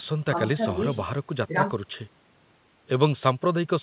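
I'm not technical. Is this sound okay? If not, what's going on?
Yes, nothing stood out as wrong when listening to this speech, which has the narrower, phone-like sound you would expect from a normal call.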